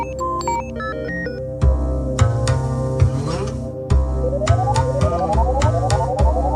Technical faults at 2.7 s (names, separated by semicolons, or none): none